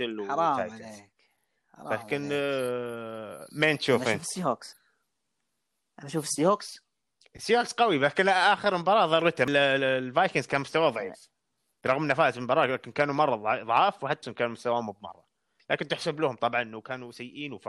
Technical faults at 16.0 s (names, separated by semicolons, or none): none